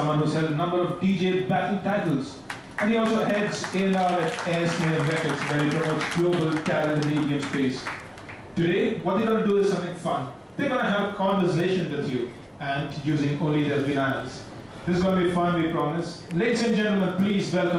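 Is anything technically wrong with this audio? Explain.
Yes. A resampler restarted on every block is audible for the whole clip. The converter processed each 100 ms block in isolation, so at each block boundary it had no real neighbouring samples and used silence or the block's opposite end instead. Every edge therefore carries a small error, heard as regular ticks at 10 Hz that appear only while there is signal. The pattern suggests an upsampling stage, consistent with 24 kHz converted to 48 kHz.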